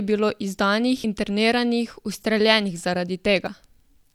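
At 1.04 s, just before "interniranih ustreljenih", the speech is broken by a brief blip from damaged data in a compressed stream. A second, longer disturbance runs from 3.44 to 3.48 s. In both places the decoder hit corrupted bytes, misread the frame, lost sync and jumped ahead to the next valid frame header.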